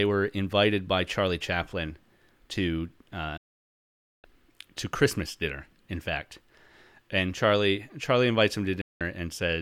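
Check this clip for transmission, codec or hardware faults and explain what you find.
Two digital broadcast dropouts interrupt the speech, at 3.37 to 4.24 s and again at 8.81 to 9.01 s. In each case the receiver stopped getting frames it could decode, whether from a lost signal or from frames failing their checksum, so it muted output until valid frames arrived. The sound snaps to silence with a fade of only about 3 ms, leaves a gap of roughly 0.86 s and then 0.19 s, and resumes further on, with the audio sent during each hole gone.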